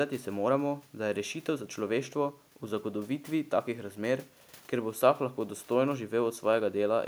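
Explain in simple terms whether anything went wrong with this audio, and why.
Nothing went wrong with this audio: the speech comes through steadily from beginning to end, with nothing that interrupts or disturbs it.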